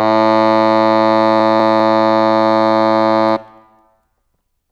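From 1.4 to 1.8 s the music has chunks out of order: a 200 ms chunk arrives one chunk late and plays after its successor. Nothing is missing, but the swapped sequence creates three hard joins, heard as a brief jumbled passage.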